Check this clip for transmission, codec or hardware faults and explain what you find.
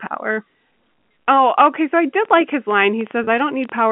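Two faults are audible in the clip, which is speech carried over a G.711 A-law telephone line limited to roughly 150 Hz to 3.4 kHz.

Train of clicks, from 2.15 s to the end of the clip. Sharp pulses of much the same shape break through about 10.5 times a second at an uneven pace, some twenty in all. The loudest peak around 5 dB above the speech itself. The likely cause is electrical interference from nearby equipment or a faulty connection or power supply. It is heard as an irregular ticking that carries on through the pauses as well as over the speech.

Packet loss with pitch repetition, at 3.24 to 3.27 s, inside the click train. About 30 ms of audio went missing, which fits a single lost packet. The receiver filled the gap by repeating the last pitch cycle it had, fading it down. Because the gap is so short, the fill never reaches silence. It comes across as a brief, slightly held buzz in the voice before normal speech resumes.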